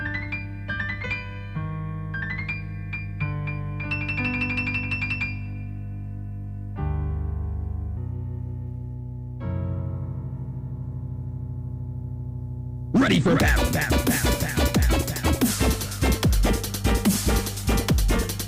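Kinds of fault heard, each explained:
Mains hum: A steady low tone at 50 Hz runs under the whole clip, sitting only about 10 dB below the wanted sound, so it is loud and always present, with some low harmonics above it. The tone comes from the power line leaking into the signal path, through a ground loop between connected equipment or magnetic pickup from a nearby transformer, and 50 Hz points to a mains supply of that frequency.
Section at the wrong speed: From 7.97 s to 15.49 s the audio suddenly sounds hurried and higher, running 1.23 times too fast, which raises the pitch by about four semitones. It snaps back to normal speed at the end of the stretch. Because speed and pitch rise together, this is a playback-rate error rather than pitch processing, most likely from that section being played or edited against the wrong clock.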